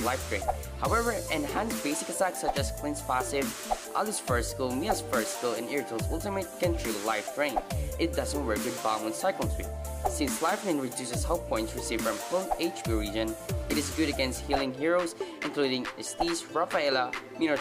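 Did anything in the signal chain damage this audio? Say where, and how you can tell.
No, nothing audible points to damage at any stage of the signal chain.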